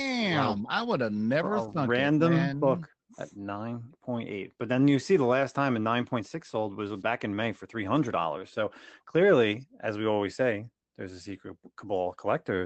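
Nothing in this speech clip stands out as a fault; it sounds like an ordinary call through an Opus-style connection, with the usual coding texture and the top end tapering off around 8 kHz.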